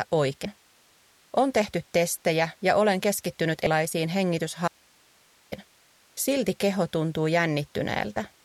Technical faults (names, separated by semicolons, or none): compressed frames skipped; audio dropout to a faint residue